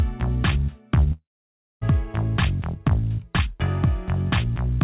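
From 1.12 to 1.83 s the sound turns into a fading buzz, then 0.58 s of silence, likely a long network dropout with lost audio.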